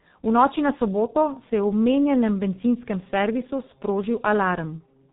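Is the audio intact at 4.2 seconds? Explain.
No. At 4.2 seconds, as throughout the clip, the speech carries heavy G.723.1 codec damage. This telephony codec encodes 30 ms frames at a very low rate, consistent with roughly 6 kbit/s, and refreshes its model of the voice slowly, so fast consonant transitions blur together. The result sounds muffled and hoarse. A spectrogram shows a hard ceiling with no energy above 4 kHz and consonant onsets smeared across frame-sized blocks instead of sharp bursts.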